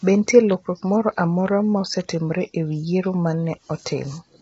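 Throughout, the speech is rough and grainy, with noise smeared between the harmonics and nothing above 7.8 kHz. The damage is heavy, which fits a bitrate around 16 kbps. The likely cause is low-delay AAC compression, whose short frames blur pitch harmonics. Plain band-limiting would leave the harmonics clean.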